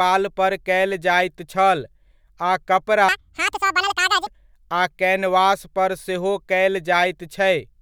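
From 3.09 to 4.27 s the audio was read two samples at a time, so the speech plays at double speed, an octave (12 semitones) higher.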